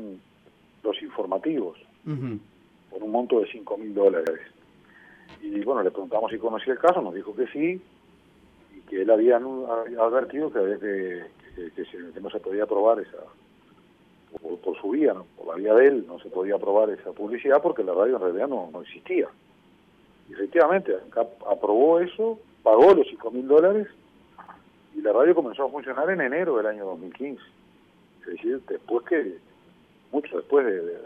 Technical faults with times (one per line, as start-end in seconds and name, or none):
4.27-4.37 overlapping chunks
14.37-14.47 overlapping chunks
24.47-24.57 overlapping chunks